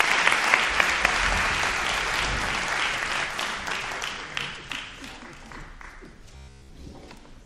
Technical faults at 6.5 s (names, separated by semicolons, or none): robotic sound from repeated short buffers